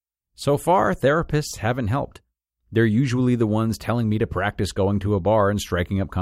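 No technical faults can be heard anywhere in the recording. There are no events to place on its timeline.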